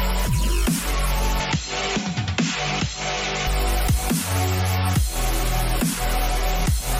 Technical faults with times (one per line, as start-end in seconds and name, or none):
1.40-3.47 input switched to a poorer device